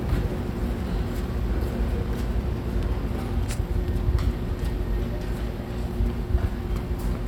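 No technical faults are audible anywhere in this audio.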